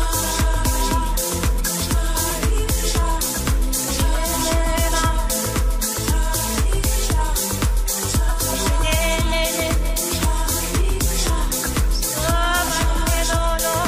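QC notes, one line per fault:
1.59 s, 6.51–6.55 s and 11.48–11.52 s: compressed frames skipped. Whole compressed frames never reach playback, so the audio jumps ahead, by roughly 50 ms at the first point and about 20 ms at the others.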